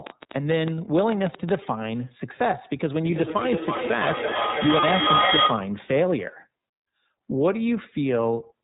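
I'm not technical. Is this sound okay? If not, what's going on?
No, there are a few problems, some running all the way through and some at particular moments.

The whole clip has gone through the iLBC codec, a phone-call style compressor that chops the speech into 30 ms slices and codes each slice separately. It keeps nothing above about 4 kHz, so everything sounds narrow, like an old phone line, and the damage is easy to hear: the speech comes out a bit rough and synthetic, with a slightly artificial edge.

Right at the start, from about 0.07 to 1.56 s, there's a train of clicks, roughly fifteen sharp ticks or pops at an uneven pace, around eight a second. They stick out well above the speech. The likely cause is electrical interference from nearby equipment or a struggling audio connection injecting these pulses.

There are two spots with lost iLBC frames, at about 0.75 s and 4.8 s, each a single 30 ms slice that never arrived. 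The decoder covers the gap by repeating the last bit of sound mixed with a little noise, so you get a tiny held, buzzy blip. Because each slice stands on its own, the speech recovers immediately afterwards.

From about 3.04 to 5.82 s there's feedback echo between two devices. Two devices in the same room are on the call, and one is playing back what the other's microphone picked up, which then gets picked up again. So the speech comes back around every third of a second or so, thinner and more ringing each time. Here the loop is strong enough that the repeats build up and at their worst get louder than the original speech.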